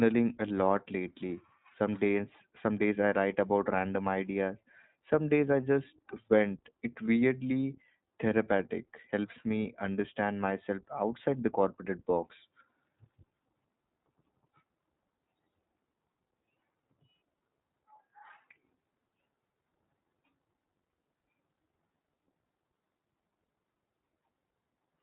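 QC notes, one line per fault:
Throughout: iLBC codec. Nothing above 4 kHz survives, and the speech carries a plainly audible rough, synthetic edge from the coder rebuilding each frame's excitation independently. The character fits iLBC's 15.2 kbps mode with 20 ms frames.
7.06–7.09 s: lost iLBC frames. A brief held, slightly buzzy vowel-like sound replaces about 20 ms of speech, which fits a single lost frame. The decoder repeated the last pitch cycle with added noise, and the voice recovers immediately because each frame decodes standalone.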